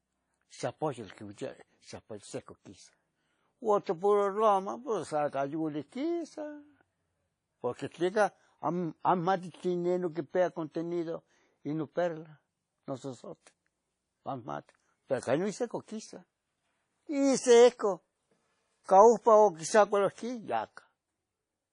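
Throughout the speech, washy ringing and signal-following hiss point to likely WMA compression near 32 kbps; spectrograms show blurred, blotchy energy, empty above 10.1 kHz.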